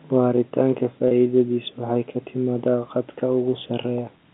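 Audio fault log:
1.08 to 1.11 s, packet loss with pitch repetition: about 30 ms of the signal drops out, which fits a single lost packet. The receiver covers the hole by repeating the last pitch cycle it had, so instead of a gap you get a brief held, slightly buzzy tone before the speech picks up again. The telephone band, roughly 250 Hz to 3.5 kHz from the G.711 A-law coding, carries straight through the repair.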